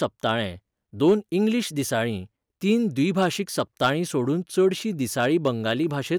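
Hard clipping appears four times in this speech. From 0.04 to 0.32 s, peaks exceed the signal path's limit by about 2 dB and are sliced flat. Another brief stretch follows at 1.06 to 1.13 s, again about 2 dB over. The worst runs from 3.20 to 3.90 s, about 5 dB over. The last spans 5.20 to 5.72 s, about 3 dB over. Each flattened top adds high harmonics, heard as crackle.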